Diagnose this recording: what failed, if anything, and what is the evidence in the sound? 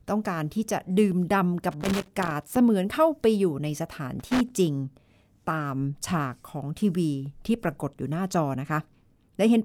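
The analogue wiring let this one down: there's loose connector crackle in two bursts, from 1.71 to 2.56 s and again from 4.20 to 4.56 s. You hear an irregular scratchy crackle riding over the speech, with no steady rhythm to it. That's a worn or dirty contact shifting and rapidly making and breaking, so the signal gets chopped in and out, and any DC sitting on the line turns each break into a little pop.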